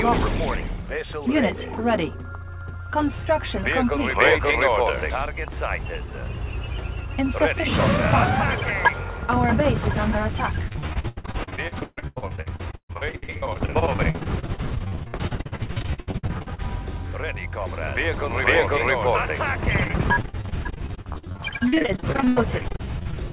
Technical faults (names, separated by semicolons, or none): repeated packet loss (robotic sound)